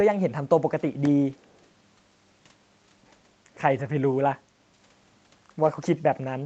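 At 1.05 s there is a lost packet rebuilt from error correction. One 20 ms packet went missing, and the decoder filled it with the low-bitrate copy carried in the next Opus packet. There is no gap, only a brief rougher, noisier patch in the speech.

From 1.37 to 1.65 s there is an echo leak: a very faint copy of the speech trailing 326 ms behind the original. The likely cause is loudspeaker playback at the far end that its echo canceller did not fully remove, so the residue was sent back into the call.

At 4.11 s another single 20 ms packet was rebuilt the same way, giving a short grainy moment. From 5.63 to 5.69 s two separate packets were lost and replaced by their error-correction copies, so 40 ms of reconstructed audio gives a slightly longer stretch of coarse, noisy texture.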